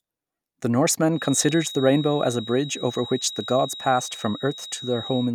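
From 1.08 s to the end, a thin feedback whistle near 3.8 kHz sits well below the speech. A speaker-to-microphone loop likely hovers at the feedback point.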